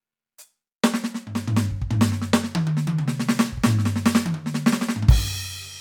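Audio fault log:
Nothing stood out on listening to this music.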